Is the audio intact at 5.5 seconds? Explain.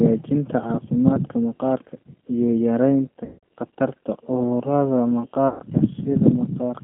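No. Right after "iyo yaraynta khatarta cudurrada", from about 5.48 to 5.61 s, there's VoIP packet loss concealed by the speech codec, with roughly 120 ms of audio missing. The decoder fills the hole by repeating its last pitch and vocal-tract shape while turning the gain down, so the speech smears into a buzzy tone or coloured noise that fades. Because each frame builds on the one before, the speech sounds weak and a bit mangled for a moment after the packets come back.

The G.729 codec is also at work here, as it is across the whole clip. It's the 8 kbit/s G.729A variant, rebuilding speech from a filter model plus a handful of pulses per frame, with the line squeezed to 150 Hz to 3.4 kHz. You can plainly hear the slightly rough, synthetic edge and the missing top end.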